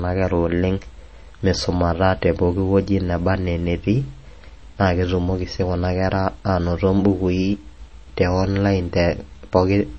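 The speech was likely encoded at a low MP3 bitrate and later saved again at a high bitrate: low-bitrate audio saved at a high bitrate. Throughout, nothing sounds above 8.3 kHz, which fits a first pass near 32 kbit/s, and the larger re-encode cannot restore the lost top end or smearing.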